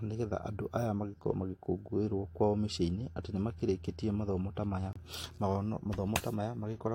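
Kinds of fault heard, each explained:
Block of digital silence: At about 3.60 s, right after "atĩ nĩ" and before "mathomo ta", the speech drops to silence for roughly 5 ms and then comes straight back. There's no fade either way, so the hard edges give it a small tick rather than an audible hole. A dropout that short and that clean fits a single 256-sample buffer that the playback or processing code didn't fill in time, leaving zeros in its place.
Gap between stream segments: From 4.93 to 4.96 s there's a hard-edged hole of about 26 ms where the audio just stops and restarts. It comes from how the stream is stitched together. The timestamps of two consecutive pieces, which here look like 2-second segments, don't line up, and the player fills the mismatch with silence. Nothing is actually lost, but the speech gets pushed later by that 26 ms.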